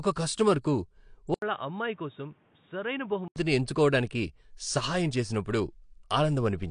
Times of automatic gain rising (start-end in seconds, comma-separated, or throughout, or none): none